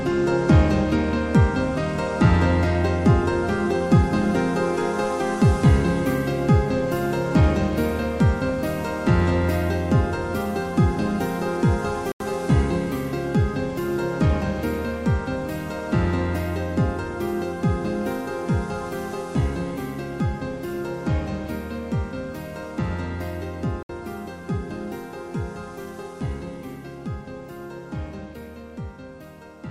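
At 12.12 s the audio drops into a block of digital silence for about 85 ms, which fits a missed 4096-sample buffer, and again at 23.83 s for about 66 ms. Each hole starts and ends abruptly, showing as a flat line in the waveform and a blank vertical stripe edged by broadband streaks on a spectrogram.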